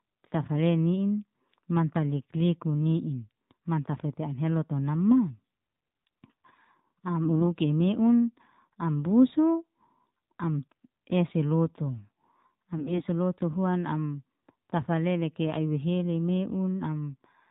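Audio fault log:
throughout: AMR narrowband mobile codec. Nothing above 4 kHz survives, and the speech has a buzzy, synthetic edge that fits a low rate around 7.4 kbps. Unlike simple telephone band-limiting, the timbre itself is rebuilt by a pulse-driven vocal-tract model, not merely dulled.
7.24–7.47 s and 12.76–13.02 s: AMR bit errors, just before "i meun am busu" and "lotu huan am tafale". Pitch and loudness hold, but the voice briefly turns hoarse, scratchy and gargly. A few percent of weakly protected bits flipped, so excitation pulses land wrongly and fine parameters drift. Unlike frame loss, nothing goes silent or repeats.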